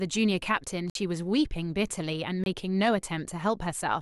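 At 0.90 s the speech drops into a block of digital silence lasting about 54 ms, and at 2.44 s a second one lasts about 23 ms, a length that fits a 1024-sample buffer left unfilled. Both cut to silence and back with no fade.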